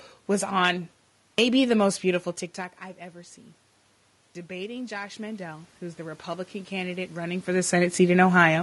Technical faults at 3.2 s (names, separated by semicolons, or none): low-delay AAC compression